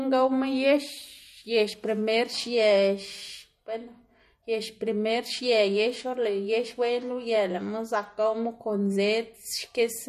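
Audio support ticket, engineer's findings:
MP3 compression, throughout. Plainly audible codec damage: speech sounds watery and swirly, treble stops dead at 13.9 kHz. Likely a starved MP3 encode, which fits 48 kbps. The encoder cuts the top band and toggles weak lines frame to frame.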